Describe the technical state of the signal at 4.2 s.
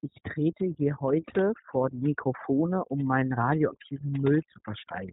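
At 4.2 s the speech carries two faults that run through the whole clip.

Overdone noise removal is active here. A noise reduction stage set far too aggressively pulls individual frequency bands down to nothing whenever they sit near its noise estimate, taking the quieter parts of the speech with them. The background falls to near silence dotted with twinkling specks. On a spectrogram the gaps between words appear almost black, scattered with isolated bright dots, while the speech itself looks patchy with holes in its weaker harmonics.

The iLBC codec is also heard at this moment. Its narrowband coding is plainly audible, consistent with the 15.2 kbps mode built on 20 ms frames. Each frame's excitation is coded on its own, without relying on the previous frame, which gives the speech a slightly rough, synthetic edge. On a spectrogram there is a flat ceiling at 3.8 kHz with nothing above it.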